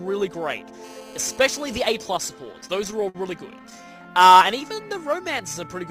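From 0.84 to 1.88 s a GSM phone buzz sits under the sound. A 2G phone in a call pulses its transmitter about 217 times a second. The audio circuit rectifies those radio bursts. The result is a hard, raspy buzz at 217 Hz with a dense stack of harmonics. It bears no relation to the sound itself. It holds nearly steady across the stretch, about 24 dB below the signal.

Repeated stalls, a stutter, run from 2.45 to 3.73 s. Packets arrived late or too slowly. The jitter buffer emptied 12 times. Each time the receiver stretched out the last sound until fresh audio came. The fills total 151 ms, about 12 percent of the span. The longest gap is 54 ms. Nothing is lost. The sound just drags and catches in short hitches.

From 3.76 to 5.68 s comes a jitter buffer slow-down. The buffer needed more in reserve. So the receiver repeated single pitch periods or small pieces of pause, many times over. This adds 165 ms. 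Playback runs at about 92 percent speed. The pitch stays the same. Sounds are drawn out, and the audio feels sluggish.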